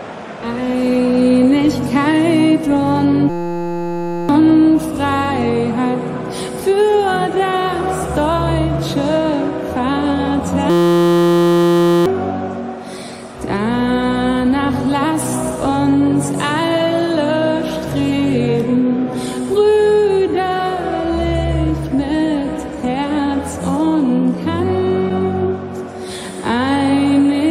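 A steady buzz at about 172 Hz replaces the audio from 3.30 to 4.29 s, and again from 10.70 to 12.06 s. This is a system hang loop. The computer or its driver stalled while the sound hardware kept replaying the same 5.8 ms stretch of its ring buffer, which fits a 256-sample buffer. Each exact repeat fuses into that tone. About one second and about one and a half seconds of audio are lost.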